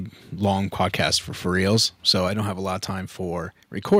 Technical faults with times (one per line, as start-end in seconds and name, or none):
0.44-0.50 microphone overload
0.80-1.15 microphone overload
1.70-1.77 microphone overload
2.28 microphone volume stepped down
3.92-3.96 microphone overload
3.94 microphone volume stepped down